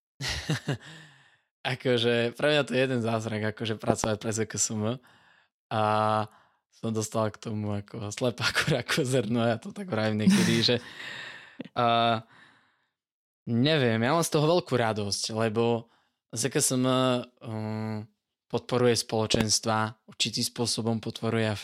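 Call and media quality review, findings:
Loud pop, twice, each a quick double pop sitting on top of the speech, which carries on underneath. First at 3.90 to 4.06 s, second at 19.35 to 19.43 s. Peaks about 20 dB over the speech. Mechanism: a sudden voltage step or spike, likely a connector, switch, static discharge or driver glitch upstream, shaped by the following circuitry into a sharp double pop.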